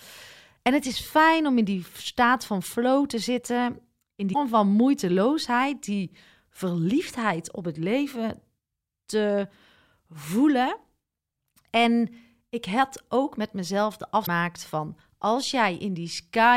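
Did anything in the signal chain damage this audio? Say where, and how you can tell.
Yes, damaged data in a compressed stream at the codec stage. Brief glitches at 4.30–4.35 s, after "flow te zitten in", and 14.23–14.28 s, after "ook met mezelf de", show as abrupt waveform breaks where corrupt frames broke decoder sync.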